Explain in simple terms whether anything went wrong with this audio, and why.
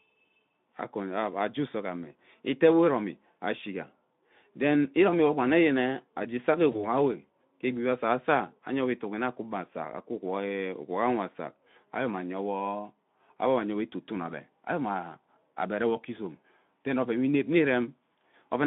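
Yes, one thing went wrong: VoIP packet loss concealed by the speech codec. Around 6.71 s a single short chunk of audio, about 20 ms, never arrived. The Speex decoder filled the gap by stretching the preceding sound, so until 6.85 s it turns briefly buzzy or noisy and weak before recovering.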